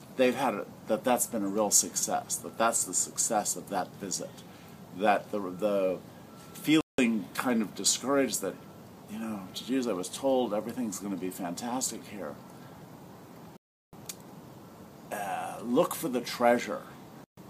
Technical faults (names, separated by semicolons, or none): Bluetooth stall